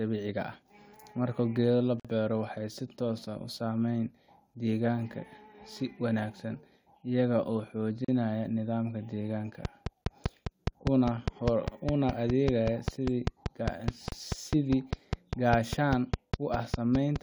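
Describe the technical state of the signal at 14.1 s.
At 14.1 s, two faults overlap. The first is a gap at a join of encoded pieces, from 14.08 to 14.12 s. The speech drops out for about 37 ms and then resumes where it stopped. This points to separately encoded pieces, about 6 s long, spliced without trimming the encoder's start-up delay and end-of-piece padding. It is heard as a brief hiccup in the flow. On the waveform it shows as a short flat stretch with abrupt, slightly smeared edges, and on the spectrogram as a narrow blank vertical band.

The gap sits inside a train of clicks that runs from 9.65 to 17.17 s, roughly 40 clicks in all at a regular rate of about 5 per second. The clicks peak at about 15 dB above the speech and are heard as steady ticking, even through pauses. The likely cause is interference from nearby equipment or a faulty connection or power supply injecting pulses. 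On the waveform they appear as evenly spaced sharp spikes, and on the spectrogram as thin broadband vertical lines at equal spacing.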